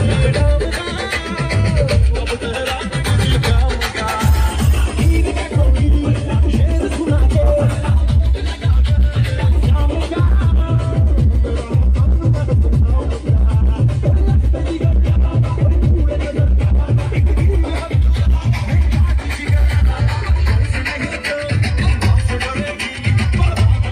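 No technical faults can be heard anywhere in the signal, which holds steady and intact throughout with nothing breaking into it.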